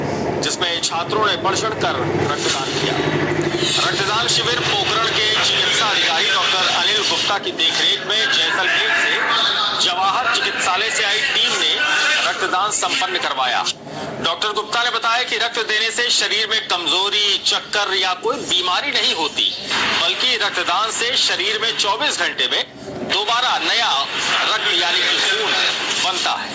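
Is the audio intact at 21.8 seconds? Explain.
No. At 21.8 seconds there is gain pumping, which runs through the whole clip, with the gain swinging around 10 dB. The likely cause is gain set far too high, with a fast limiter pulling it down. Unlike a noise gate, the background rises in the gaps instead of cutting out.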